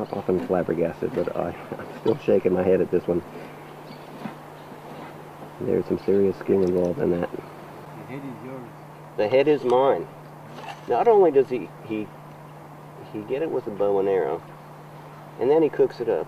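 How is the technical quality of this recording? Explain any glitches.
The recording has four short decoding glitches. Brief chirp-like blips and bursts of noise break into the sound at 2.07 s, from 4.06 to 4.08 s, from 12.48 to 12.51 s and from 14.47 to 14.49 s. The first is the loudest, peaking around -20 dBFS. The later ones sit lower, near -30 to -35 dBFS. Each is a corrupt frame decoded: flipped bits in a compressed frame made the decoder misread gains or codes, spraying energy into the wrong frequencies for about the length of each damaged frame.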